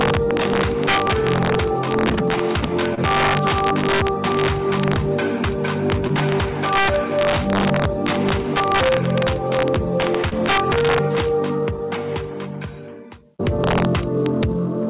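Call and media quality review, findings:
Integer overflow, throughout. Gain or mix stage driven about 4 dB past full scale with no saturation or limiting; peaks over the limit wrap to the opposite sign instead of clamping. Symptom: violent, sharp cracks on every loud peak, harsher than clipping, hitting a small fraction of samples. Probable component: fixed-point gain or summing stage.

Short concealed packet loss at 2.94 to 2.99 s, 6.07 to 6.11 s, and 10.29 to 10.33 s. Each gap fits one lost 20 ms frame; the receiver's concealment extrapolated the preceding sound for 27, 19 and 22 ms, then crossfaded back. Symptom: brief smear or wobble, short transients possibly dropped. Probable component: network path or jitter buffer underrun. Band limit at 4 kHz fits G.711 mu-law at 64 kbps.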